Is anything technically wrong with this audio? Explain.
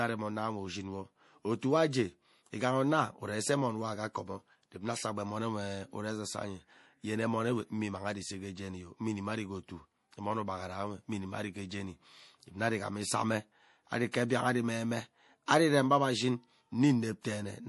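Yes. There are two problems: a codec character across the whole clip, and two brief pre-echo events.

MP3 compression runs throughout the speech. Nothing is present above about 11.5 kHz, so the top end sounds dull. Faint detail turns watery and swirls, and s sounds chirp metallically. The cause is likely MP3 encoding at a low bitrate, around 48 kbps. With so few bits, the encoder cuts the treble at a fixed point. It also drops weak frequency content, which flickers in and out from frame to frame.

Pre-echo appears twice. The first runs from 14.12 to 14.14 s, spreading about 20 ms ahead of an attack. The second is at 15.46 s, spreading about 19 ms. A short hiss comes just before each sharp onset, and the onset itself sounds softened. The codec spreads its noise evenly across a block. When a loud attack lands late in that block, noise sized for the attack fills the quiet moment before it.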